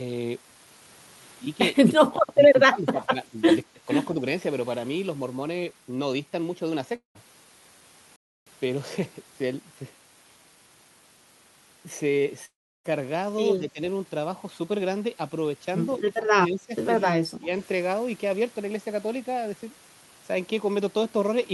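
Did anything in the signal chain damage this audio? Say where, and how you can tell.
Yes, at three stages.

Call processing: the speech is pushed down in short bursts at 2.31–2.42 s, 2.59–3.36 s, 3.64–3.88 s, 13.59–13.81 s, 16.06–16.74 s and 17.19–17.52 s, by about 15 dB, and about 20 dB at 3.64 s. This is speech suppressed in double talk, likely from an echo canceller that mistook the near talker for loudspeaker echo while the far side was talking, and attenuated both. On a waveform the envelope sags abruptly and recovers. On a spectrogram those bands fade, with the upper harmonics thinning.

Network: long network dropouts occur at 6.95–7.17 s, with about 200 ms of audio missing, and at 12.45–12.86 s, with about 400 ms missing. In each, the last sound is stretched into a buzzy, fading tail, and true silence follows for roughly the final 130 ms and 330 ms respectively. Speech then resumes further on, with the lost stretch gone. 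A spectrogram shows a smeared, repeating harmonic pattern that decays to black. The waveform shows a periodic decaying texture, then a flat line.

Playback: from 8.16 to 8.47 s, the output simply stops for about 0.3 s and then carries on. This is a playback stall, likely the player starving for data or its thread being blocked. The waveform shows a hard cut to silence with no concealment fill, unlike the dropouts. The spectrogram shows a clean vertical gap with sharp edges on both sides.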